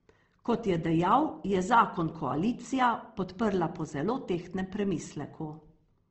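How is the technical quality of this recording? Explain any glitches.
The recording's technical quality is held back by one fault that runs through the whole clip: audible codec damage, most likely from Opus compression.

From start to finish the speech sounds rough and grainy, with harmonics turned noisy, and nothing is present above 8.2 kHz. When bits run short, the CELT mode keeps each band's energy but fills it with folded or noise content. This points to a low rate near 16 kbps. A spectrogram would show a hard ceiling at 8.2 kHz and speckled, blurred harmonics beneath it.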